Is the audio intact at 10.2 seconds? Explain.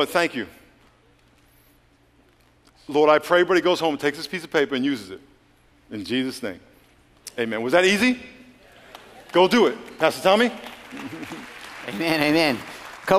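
Yes, the audio at 10.2 seconds is intact, with no dropout, click, distortion or other fault at that moment.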